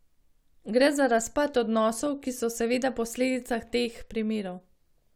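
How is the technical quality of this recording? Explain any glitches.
No audible glitches or faults.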